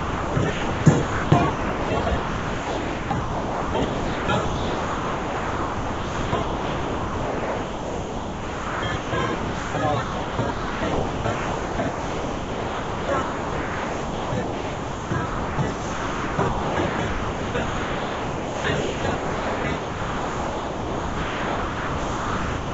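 From 0.0 to 9.74 s the sound is chopped by the voice detector. The sender's detector repeatedly switched transmission off and on, and about 8.24 s of this stretch was replaced by comfort noise of the RFC 3389 kind, with the detector's switching the likely cause of the gaps. Quiet portions and onsets drop out. This is heard through a G.722 path at 64 kbps that carries nothing above 8 kHz.

At 1.70 s, inside that stretch, a repeated buffer occurs. A block of about 1.45 ms, which fits a 64-sample buffer, was played four extra times because fresh audio did not arrive in time. With so small a block and a hard join at each repeat, it is heard as a brief click-like buzz rather than a stutter.

From 10.02 s to the end, the sound is again chopped by the voice detector, with the same comfort-noise substitution. The detector gating off transmission is again the likely cause. It produces the same holes whenever sending stops.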